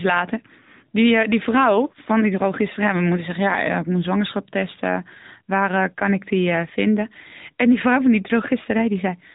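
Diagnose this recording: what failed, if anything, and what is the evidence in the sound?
The codec stage is at fault: the whole clip has been through the AMR narrowband mobile codec. Nothing above about 3.8 kHz survives, so the speech has that boxed-in, telephone-band sound from start to finish. The damage is plainly audible, with a buzzy, synthetic edge where the vocal-tract model and sparse pulse excitation rebuild the voice. That level of artefacting fits one of AMR-NB's higher-rate modes, around 10 kbps.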